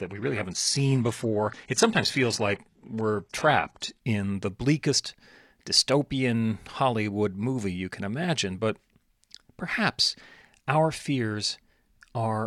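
Until 4.0 s, an adaptive stream starting at a low bitrate gives synthetic treble; quality jumps gaplessly, unlike a rebuffer, before "in the bleakest dystopian".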